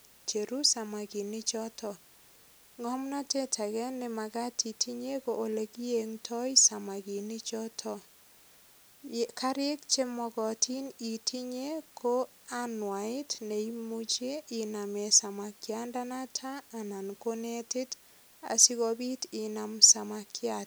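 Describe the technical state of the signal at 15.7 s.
At 15.7 s the speech carries low bit depth with dither, present across the whole clip rather than at this moment alone. The audio uses only 9 bits, and noise was added before rounding, so the rounding error becomes a constant, even white hiss about 30 dB below the speech. Undithered truncation would instead leave a gritty distortion that follows the speech and fades in pauses; here the hiss stays level and the speech itself stays clean.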